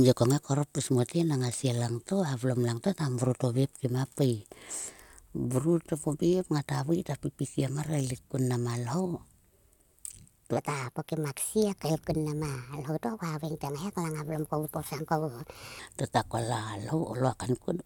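A section at the wrong speed runs from 10.57 s to 15.79 s, where the speech is played back 1.3 times faster than it was recorded. Because speed and pitch move together, the voice jumps up by about five semitones and sounds hurried and thin, then drops back to its natural pace and register at 15.79 s. The likely cause is an editor or player running this stretch against the wrong clock.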